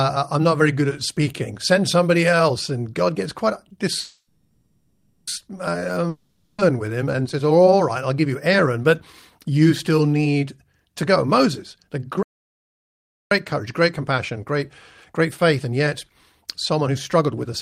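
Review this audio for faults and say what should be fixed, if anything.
At 3.99 s the speech stalls into a fading buzz that runs until 5.29 s, ending in a brief silence of about 40 ms, then carries on exactly where it stopped with nothing missing. This is a call audio freeze, likely caused by packets held up in transit until the jitter buffer ran empty, so the receiver stretched the last sound to fill about 1.3 s. That pause also adds about 1.3 s of delay to everything after it. A larger or more adaptive jitter buffer would prevent this.

From 6.09 s to 6.60 s the speech again turns into a decaying buzz, but this time it returns further along, and about half a second of speech is gone for good. This is a long network dropout, which points to packets that never arrived and not to packets that arrived late. The receiver concealed the half-second hole with fading synthetic sound, but it could not recover what was lost. 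Forward error correction or redundant packets on the link would prevent this.

Between 10.82 s and 14.53 s the speech runs about 5% fast, and between 15.14 s and 17.48 s about 4% fast, at unchanged pitch, so the first stretch sounds hurried. This is jitter buffer speed-up. The buffer had built up surplus audio, and it trimmed it by cutting many short pitch-period slices, roughly 0.2 s in the first stretch and 0.1 s in the second. A more gradual drain rate would prevent this.

From 12.23 s to 13.31 s the sound cuts to silence with no room tone, for about 1.08 s, and then resumes mid-flow with that stretch missing. This happens inside the sped-up section. It is an audio dropout to silence. The abrupt, silent gap likely points to the input itself being lost, not the network, and the recorder kept writing silence until the signal returned. Secure device connections and monitoring of the input level would prevent this.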